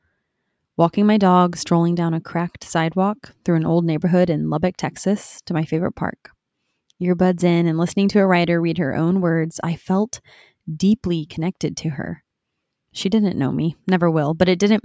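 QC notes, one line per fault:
Nothing to flag on this one; I listened the whole way and didn't hear anything worth noting.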